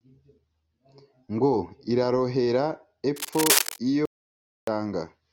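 From 3.16 to 3.79 s, a burst of cable scratch noise sits over the speech: dense, irregular crackling and rustling at roughly the same loudness as the voice, so the two compete for about 0.63 s. The uneven, grainy texture points to contact resistance jumping around as a worn cable, connector or control was moved. That rapid variation modulates the signal path and injects noise bursts.

Shortly after, from 4.05 to 4.67 s, there is an audio dropout to silence. The speech cuts off abruptly and about 0.62 s is lost. The gap is silent, with no room tone or noise floor underneath, and then the speech resumes mid-flow. That pattern fits the input feed being lost, likely through a momentary disconnect or mute, while the recorder kept writing silence.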